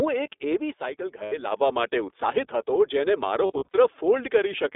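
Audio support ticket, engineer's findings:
iLBC codec, whole clip. Narrowband speech, band roughly 300 Hz to 3.6 kHz, nothing above. Plainly audible coding damage: rough, slightly synthetic texture. Each frame's excitation coded independently. Frame timing fits 20 ms frames, the 15.2 kbps mode. Probable component: VoIP leg using iLBC. Damage sits in the codec itself, not the network.

Lost iLBC frames, 1.24 to 1.33 s. About 80 ms gap, fits four lost 20 ms frames. Heard as a held, slightly buzzy vowel. Decoder repeating the last pitch cycle plus noise. Recovery near-instant after.

Lost iLBC frames, 3.46 to 3.76 s. About 180 ms lost, scattered over 280 ms. Longest single run around 40 ms. Several short buzzy concealment patches, clean frames between. Probable component: network packet loss.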